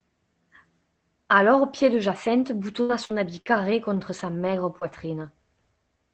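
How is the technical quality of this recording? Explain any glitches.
Quality is held back by one fault; the speech is also band-limited to about 8 kHz, consistent with a call codec. Scattered short gaps run from 2.81 to 5.27 s: about four lost or late packets, the longest around 70 ms, were concealed by extending the preceding sound. This leaves brief ticks, smears and hiccups.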